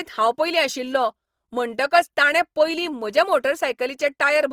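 From start to finish the speech carries plainly audible codec damage, most likely Opus compression. Energy stays present across the whole band, reaching up to about 20.2 kHz, yet the finer detail in each band has been replaced by folded copies or noise. So the sound comes out grainy and rough rather than hollow or swirling. That texture points to the music-oriented CELT mode running at a low rate, on the order of 24 kbps.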